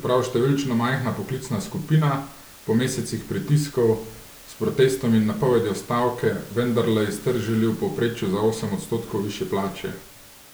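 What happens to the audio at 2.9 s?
At 2.9 s the speech continues intact, with only the room noise about 23 dB below it and no fault in the signal.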